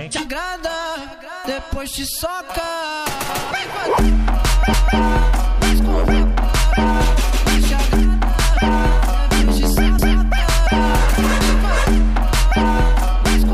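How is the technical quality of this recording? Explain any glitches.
The recording has one recurring fault: overlapping chunks, at 4.73 to 4.99 s and again at 9.98 to 10.24 s. The audio was handled in blocks of 5 s, and each new block began about 250 ms before the previous one finished, so that quarter-second of sound plays twice at each join. It is heard as a brief stutter, a short stretch repeating immediately, and it recurs at the same 5-second interval.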